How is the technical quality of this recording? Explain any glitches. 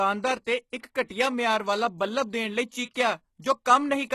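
The speech in this recording carries plainly audible codec damage throughout, plus three short pre-echo smears.

Across the whole clip the treble is gritty and metallic, s sounds go lispy, and nothing comes through above 12.3 kHz. That's likely HE-AAC compression at a low bitrate, around 16 kbps. The top end is rebuilt from copied lower bands rather than coded directly, so the harmonics don't line up.

Pre-echo shows up at 0.79 to 0.83 s, at 1.05 to 1.10 s just before "ਮਿਆਰ ਵਾਲਾ ਬੱਲਬ", and at 2.94 s. The codec spreads its noise across a whole block, so a short hiss leaks in 18 to 53 ms ahead of each sharp attack and softens its onset.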